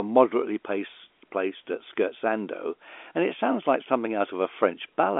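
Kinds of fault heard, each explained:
No faults present; the speech carries the normal narrow band of G.711 telephone coding, roughly 300 Hz to 3.5 kHz with nothing above about 3.7 kHz.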